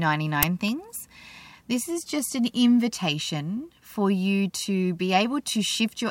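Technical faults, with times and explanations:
0.43 s, uninitialised buffer: a very loud burst of harsh digital noise lasting about 5.3 ms cuts into the speech. Its length fits a 256-sample block that reached the output before any audio was written into it, so whatever stale values sat in that memory were played as samples. Unlike a switching spike, it is a dense, noise-like slab of fixed duration that replaces the sound rather than sitting on top of it.
0.68 s, electrical switching spike: a sharp, tight snap about 3 ms long rides on top of the speech, which carries on underneath. This is likely a nearby switch, relay or static discharge whose arc was picked up by the audio line. It is shorter and more click-like than the buffer burst, with no noisy body or steady block length, and the sound beneath it is not replaced.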